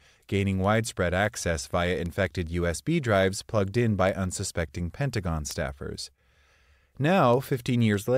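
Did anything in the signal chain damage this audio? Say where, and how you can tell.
Yes, at the digital link between converters: word clock ticks roughly every 0.2 s from 0.24 to 8.15 s. They come from an unlocked receiver clock slipping a sample each time, which suggests roughly 100 ppm drift.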